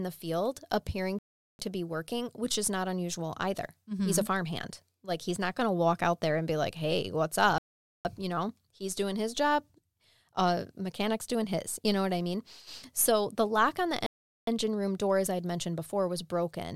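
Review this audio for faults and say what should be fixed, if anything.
Three rebuffering stalls interrupt the speech: at 1.19 s after "the field appearing" (0.40 s), at 7.58 s after "be like hey what's" (0.47 s), and at 14.06 s after "the lock on the" (0.41 s). Each time the player's buffer ran dry, so the speech goes silent and resumes exactly where it left off. To prevent this, buffer more ahead of playback or switch to a lower-bitrate stream when the download falls behind.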